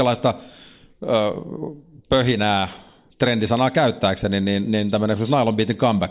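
No technical faults are audible.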